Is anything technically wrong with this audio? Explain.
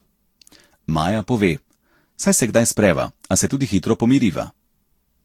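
Yes. Throughout the speech there is generation loss: the sound is swirly, smeared and hollow, with consonant attacks blurred and nothing above about 19.1 kHz. This is likely from the audio being decoded and re-encoded with a lossy codec, which fits around seven Vorbis passes at roughly 70 to 80 kbit/s. A single encode at that rate would be much cleaner. Here each pass quantised on a shifted frame grid, so the holes and noise piled up.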